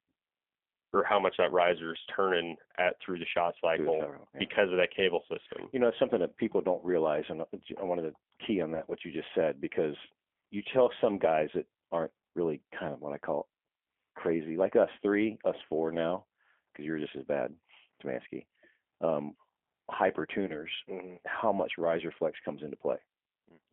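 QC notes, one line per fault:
Throughout, G.729 codec: the sound is squeezed into a band of 250 Hz to 3.4 kHz and rebuilt at 8 kbit/s from a vocal tract filter, a pitch predictor and a few pulses per frame, giving plainly audible roughness and a synthetic edge.
8.75–8.83 s and 20.47–20.52 s, VoIP packet loss concealed by the speech codec: in each case about 20 ms of audio is missing, which fits a single lost packet. The first comes after "wanted to key on" and before "what you just said". The decoder fills each gap by stretching its last pitch and filter into a fading buzzy tone or coloured noise. Because each frame builds on the one before, the distortion lingers to about 82 ms and about 50 ms respectively.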